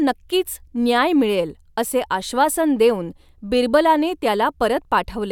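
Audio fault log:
No faults can be heard in this speech recording. Nothing in it calls for an entry in this log.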